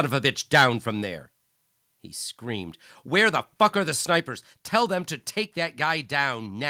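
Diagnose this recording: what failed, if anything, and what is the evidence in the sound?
Microphone overload at 0.55 to 0.65 s, between "of a bitch" and "from there": the peaks flatten and turn harsh and crackly, driven about 7 dB past full scale, so a noticeable share of the waveform is squared off. The likely stage is the converter input. Unlike codec distortion, the grit follows the loudest moments only.

Microphone volume stepped down at 1.02 s by about 2 dB, and again at 4.2 s, just after "are the", by about 4 dB. Voice and background fall together in a single step, which likely points to call processing lowering the device input gain. A gate or compressor would instead move smoothly and recover.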